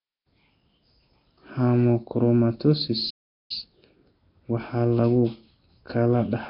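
Throughout the speech the sound carries a rough, hissy halo with a smeared, underwater texture, likely from Nellymoser compression. Its fixed, coarse bit allocation starves weaker bands and fills them with noise, consistent with a rate near 22 kbps.

From 3.10 to 3.51 s the output drops to silence for roughly 0.4 s mid-flow, then resumes. This playback stall is likely the player running short of data or its audio thread being blocked until it could continue.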